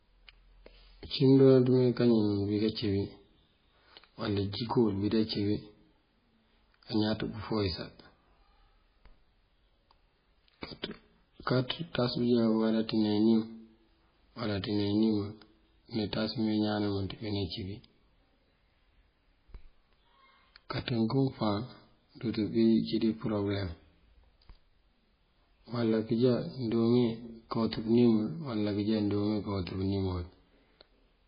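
Throughout, heavy MP3 compression is the likely cause of watery, swirling speech with nothing above 5 kHz, a flat spectrogram ceiling and flickering gaps, consistent with about 16 kbps.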